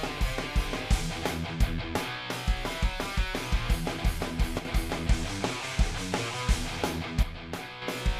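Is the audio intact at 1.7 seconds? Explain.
Yes, at 1.7 seconds the audio plays through cleanly, with no dropout, click, distortion or other fault to be heard.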